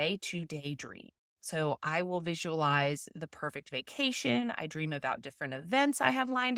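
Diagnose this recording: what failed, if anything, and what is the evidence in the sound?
Nothing failed here that I can hear: the speech comes through the Opus voice coding in its hybrid mode at about 24 kbps with the full band kept, and there's no dropout, click, distortion or other fault in any stage to point to.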